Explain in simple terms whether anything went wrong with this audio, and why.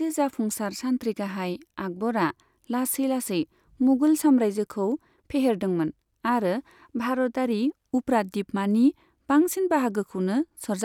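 Nothing went wrong with this audio, so there is no fault to explain.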